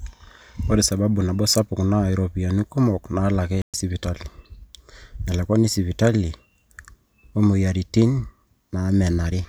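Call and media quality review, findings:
Playback stall, 3.62–3.74 s. Speech cuts out mid-flow for about 120 ms, full silence, then resumes. Probable component: player output path, likely a starved jitter/playout buffer or a blocked audio thread that stopped feeding the device until recovery. Gap too long and too clean to be a dropped packet concealed by the decoder.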